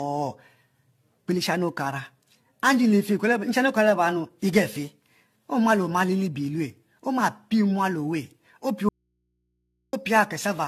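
Generation loss runs through the whole speech clip. It sounds swirly, hollow and smeared, with softened consonant attacks and nothing above 14 kHz. That fits AAC-LC at around 64 kbit/s, likely re-encoded about seven times, each pass adding fresh quantisation noise and spectral holes.

An audio dropout to a faint residue follows from 8.89 to 9.93 s. The speech cuts off abruptly for 1.04 s, leaving only mains hum about 50 dB below the signal. This likely points to a lost source feeding a path that stayed live.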